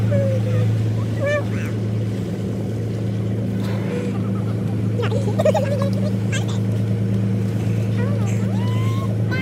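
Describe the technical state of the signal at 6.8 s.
At 6.8 s you're hearing the same thing that runs through the whole clip: the audio read two samples at a time, so it plays at double speed. Whatever read the stream treated each pair of samples as a single frame, probably because it assumed two channels or a sample format twice as wide, so everything moves twice as fast and sits a full octave, 12 semitones, too high.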